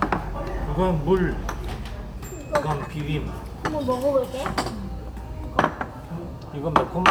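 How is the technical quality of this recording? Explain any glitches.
The recording is technically sound, with no glitches, dropouts or other faults anywhere in the audio.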